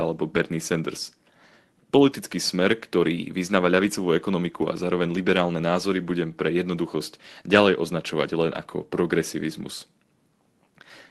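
Lost packets rebuilt from error correction occur at 4.85 s, between "vyznáva ľavicovú ekonomiku a" and "liberálne názory budem pre", and from 8.51 to 8.57 s, after "jednoduchosť ďalej označovať len". No gap is heard. The decoder instead plays a coarse low-bitrate copy carried in the following packet. That gives about 20 ms and then 40 ms of rougher, noisier sound in the Opus call audio.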